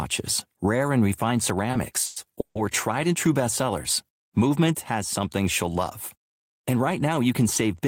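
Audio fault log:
1.71 to 1.76 s, short stall from a late packet: A packet missed its playout time and the jitter buffer ran dry, so the receiver stretched the last bit of speech by about 20 ms until the packet turned up, then resumed exactly where it left off. Nothing is lost, but the sound at that point is held a little too long, with a slight buzz or dip, and everything after it plays about 20 ms later.
2.05 to 2.19 s and 2.40 to 2.58 s, call audio freeze: Packets were likely held up in transit, leaving the jitter buffer empty, and the receiver filled the wait by continuing the last sound, for about 110 ms and then about 150 ms. Each freeze is a fading buzz or hiss rather than silence. The speech then carries on from where it stopped with nothing missing, so these gaps are inserted time, and playback ends up running about 280 ms behind.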